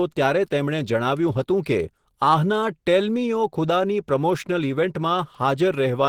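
Speech runs the full length of the clip with plainly audible Opus compression damage. The voice sounds hoarse and muffled, with a grainy, noisy roughness. That points to the encoder's hybrid speech mode at a rate around 16 kbps, likely starved for bits. Unlike MP3 artefacts, there is less watery swirl and few spectral gaps. Bands stay filled with noise, and content still reaches about 20.2 kHz rather than being narrowed.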